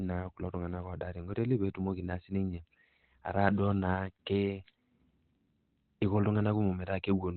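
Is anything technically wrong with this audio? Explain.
Yes. Throughout, the speech sounds muffled and hoarse, with nothing above 4.2 kHz. This is Opus compression, likely in its SILK speech mode at a narrowband setting that fits roughly 12 kbps. The narrow band and rough texture, without MP3-style swirl, set it apart.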